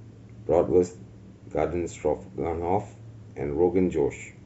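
Nothing in this speech recording stands out as a technical fault; there are no dropouts, glitches or interruptions to point to anywhere along the way.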